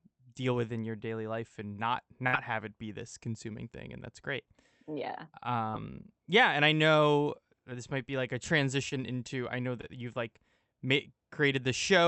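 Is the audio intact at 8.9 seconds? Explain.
No. A short concealed packet loss hits between 8.89 and 8.93 s, right after "might be like a" and before "into I know". About 20 ms of the call's audio arrived too late for the decoder. The receiver covered the gap by extending the preceding sound for about 25 ms, then crossfaded back into the real signal. The result is a brief smear or wobble at that instant, and any short consonant that fell inside the gap may have dropped out.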